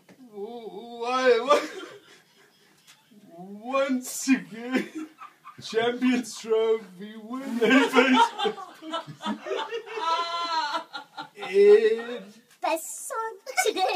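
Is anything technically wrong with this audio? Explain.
Yes. From 12.60 s to the end at 13.95 s, there is a section at the wrong speed. It was likely played against a mismatched clock, running 1.63 times too fast. Speed and pitch rise together, so the sound turns suddenly hurried and shrill, roughly ten semitones higher.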